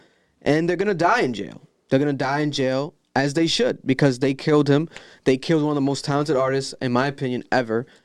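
Nothing technically wrong turns up in this short bit of speech; there's no fault to point to anywhere along it.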